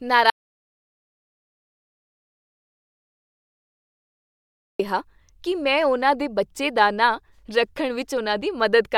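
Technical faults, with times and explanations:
0.30 to 4.79 s, audio dropout to silence: the speech cuts out abruptly just after the start and returns mid-flow about 4.5 s later. The gap is silent, with no room tone, hiss or background left at all. That points to the input itself vanishing while recording carried on writing silence, likely from a disconnected device, a failed link or a stray mute. Whatever was said during those seconds is lost.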